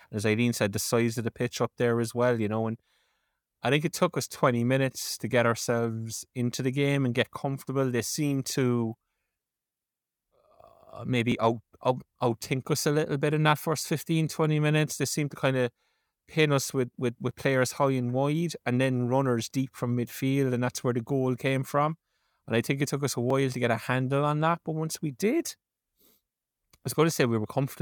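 At 5.32, 11.32, 17.31 and 23.30 s the speech skips briefly. These are cases of audio missing between chunks. The skips come about 6 s apart, which fits a recorder writing the audio in 6-second chunks. A few milliseconds are likely lost each time one chunk closes and the next opens. The two sides are joined directly, with no gap of silence. So the sound jumps forward at a steady rhythm.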